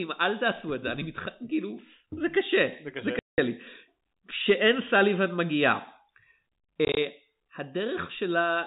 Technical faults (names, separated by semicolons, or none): packet loss filled with silence